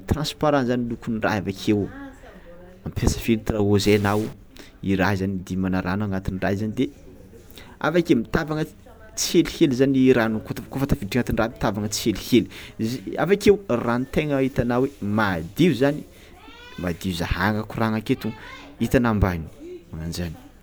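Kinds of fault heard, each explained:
Stuck bit: From 3.83 to 4.33 s the speech turns harsh and buzzy. The likely cause is one converter bit held at a fixed value, which adds or removes a step of about -35 dBFS on roughly half the samples. The waveform shows small square offsets riding on the signal, and the spectrogram shows broadband hash filling that half-second.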